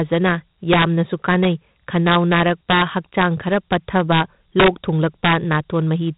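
From start to finish the speech carries 4-bit ADPCM compression: each sample is coded as a coarse step from a predicted value, so quantisation error rides along with the signal's level as a gritty hiss on every loud syllable, with smeared, distorted onsets where the step size lags. The damage is heavy, consistent with a 32 kbps stream. On a spectrogram, noise fills the gaps between harmonics and nothing appears above 3.8 kHz, which gives a dull, band-limited tone.

Integer overflow strikes at 0.73–0.84 s, 1.31–1.45 s, 2.07–2.82 s, 4.12–4.21 s, 4.60–4.68 s and 5.25–5.55 s. In each case the peaks exceeded the integer ceiling by about 1 to 4 dB and wrapped to the opposite extreme instead of being limited. These are heard as violent cracks, far harsher than clipping. On the waveform the crests flip abruptly to the opposite sign, and on a spectrogram each one shows as bright vertical broadband streaks.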